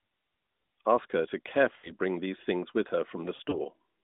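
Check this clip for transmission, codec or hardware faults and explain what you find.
Two bursts of lost AMR speech frames interrupt the narrowband, telephone-band sound.

Lost AMR speech frames at 1.76 to 1.91 s, between "her to" and "bring these things with": corrupted frames fail their check. The decoder repeats the last pitch and vocal-tract settings at falling gain, so the sound smears and fades for about 80 ms, which fits a run of four frames.

Lost AMR speech frames at 3.36 to 3.55 s, after "these things with her": about 60 ms of concealment is scattered over 160 ms, with runs of up to 40 ms. This gives warbly dips rather than one fade.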